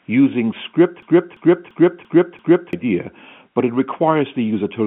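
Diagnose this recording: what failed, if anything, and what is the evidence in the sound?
The driver or host stalled between 1.02 and 2.73 s, producing a system hang loop: the audio hardware kept replaying its ring buffer while no fresh samples arrived. The same 341 ms piece of speech repeats five times at about 2.9 Hz, giving a machine-gun stutter, which fits a 16384-sample buffer. Roughly one and a half seconds of real speech never reached the output, beneath the narrowband telephone G.711 coding band.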